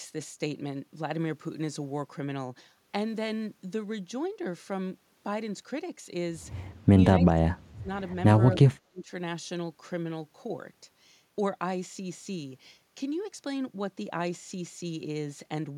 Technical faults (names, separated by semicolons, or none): speech suppressed in double talk